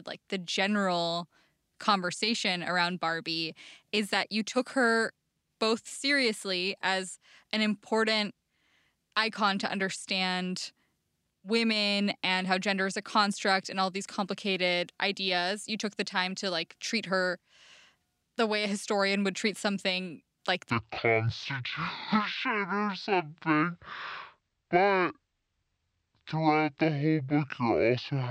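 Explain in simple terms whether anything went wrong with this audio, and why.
A section at the wrong speed runs from 20.7 s to the end of the clip at 28.3 s. There the speech plays at about 0.55 times its proper speed, so it sounds slowed and drawn out, and the pitch drops by about ten semitones, making the voice noticeably deeper. Speed and pitch fall together because the audio was likely played back against the wrong clock, stretching every sound.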